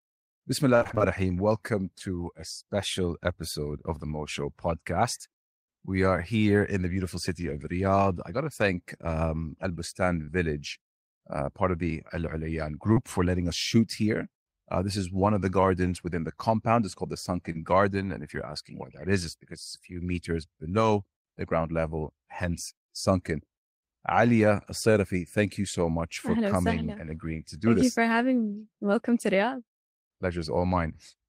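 From 0.75 to 1.02 s, repeated packet loss (robotic sound): six separate gaps opened up, the longest 57 ms, and the receiver patched each by extending the previous sound. With about half the stretch synthesised, the speech turns choppy and robotic.

Short concealed packet loss then strikes four times: at 1.98 s just before "a special episode of", at 10.24 s, at 12.93 s ahead of "for letting us shoot", and at 17.52 s after "called the". Each time 20 to 40 ms of audio failed to arrive and was covered over, leaving a quick smear or wobble.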